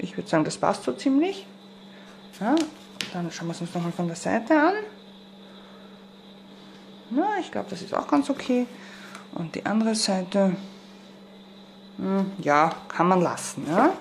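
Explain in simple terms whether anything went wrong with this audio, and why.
Nothing went wrong with this audio; there are no faults to point to.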